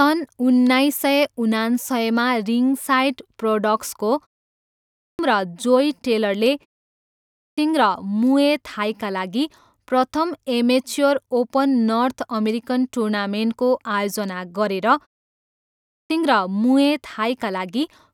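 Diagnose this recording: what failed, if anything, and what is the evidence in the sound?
The playback output device sleeps during short silences and is slow to wake, causing a clipped start after a pause. After gaps of about 0.4 to 0.5 s, speech resumes abruptly with its opening missing: about 0.56 s at 4.63 s, 0.63 s at 6.95 s and 0.65 s at 15.45 s.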